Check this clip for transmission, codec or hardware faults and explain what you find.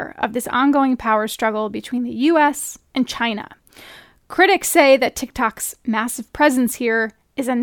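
Nothing faulty can be heard anywhere in this speech.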